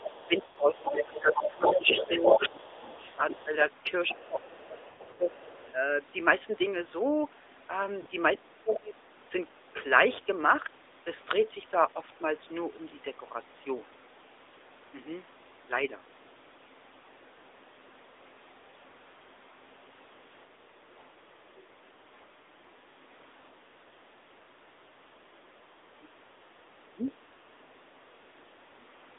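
AMR narrowband mobile codec, throughout: the sound is confined to a 300 Hz to 3.7 kHz band and has a buzzy, synthetic edge, which fits AMR-NB at around 10.2 kbps. The codec rebuilds the sound from a vocal-tract model driven by sparse pulses, so the damage is plainly audible.

Speech suppressed in double talk, from 0.0 to 3.54 s: the talker's level dips by roughly 15 dB in pieces totalling about two seconds. The likely cause is the echo canceller turning everything down because it could not tell the near talker from the loudspeaker echo while both were active.

Other side's voice leaking through, from 0.18 to 3.44 s: a second voice sits at about the same level as the talker. It is probably far-end audio from the loudspeaker that the echo canceller failed to subtract from the microphone signal.

Lost AMR speech frames, from 0.46 to 0.58 s: 100 ms of audio drops out. The decoder repeats the last good pitch and vocal-tract settings with falling gain, so the sound smears and fades before recovering roughly.

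At 3.02 to 3.22 s, 80 ms of losses are scattered over 160 ms in runs no longer than 20 ms, which gives brief dips and warbles.

Other side's voice leaking through, from 4.08 to 5.73 s: a faint residue of the far-end voice, about 25 dB below the talker, sits under the speech.

Speech suppressed in double talk, from 4.11 to 5.3 s: likely the same gating pulls the talker down by roughly 15 dB for about a second in total.

Lost AMR speech frames, from 4.90 to 5.20 s: 180 ms is lost across 280 ms. The longest run is 100 ms, and there the sound is drawn out and fades toward silence.

Lost AMR speech frames at 8.02 to 8.08 s: a 40 ms loss adds a short dip.

Other side's voice leaking through at 8.74 to 8.78 s: a scrap of far-end voice, about 15 dB down, slips through.

Speech suppressed in double talk, from 25.96 to 26.27 s and from 26.92 to 27.07 s: the talker drops by about 20 dB and then by about 15 dB, in brief cuts that are again consistent with double-talk gating.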